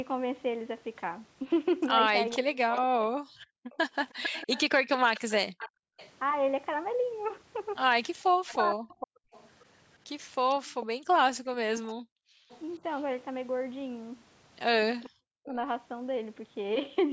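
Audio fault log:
2.29–6.1 s and 8.47–12.6 s, echo leak: a delayed copy of the speech trails the live talker by about 0.45 s, around 15 dB below it in the first stretch and 20 dB below in the second. This is likely residual loudspeaker pickup that the far end's echo canceller failed to remove.
2.39–3.05 s, 8.29–9.23 s and 15.02–15.57 s, speech suppressed in double talk: the talker's speech drops in pieces by up to roughly 40 dB, for about half a second, 0.7 s and 0.4 s of each span. The cause is likely an echo canceller mistaking overlapping talk for echo and attenuating both.
3.33–5.97 s and 10.88–12.5 s, background gated by the echo canceller: the room sound dips by as much as about 40 dB for roughly a second in the first span and 0.7 s in the second, then recovers. This happens as the canceller clamps the microphone while the loudspeaker plays and releases it afterward.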